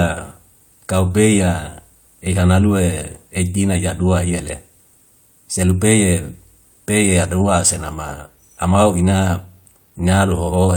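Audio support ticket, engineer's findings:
Listened through the speech recording and found nothing that stood out as a fault.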